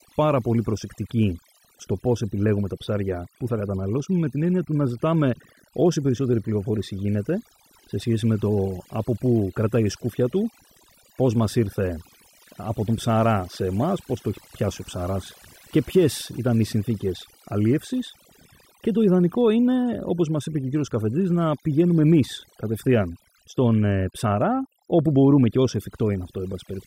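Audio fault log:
Throughout: overdone noise removal. Noise reduction was pushed too hard, so bands near the noise floor get gated out, leaving twinkly near-silence and taking quiet parts of the voice with them.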